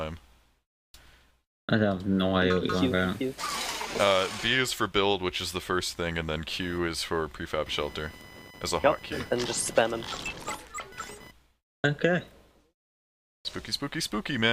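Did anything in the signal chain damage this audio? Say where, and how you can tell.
Yes. Bit error spikes at 3.49 s and 8.21 s: flipped bits in storage or a digital link, making lone waveform needles and full-band spectrogram lines.

Computer activity noise, 6.60–11.31 s, is load current on a shared analogue ground: a buzz near 1 kHz, about 20 dB down, a horizontal spectrogram band.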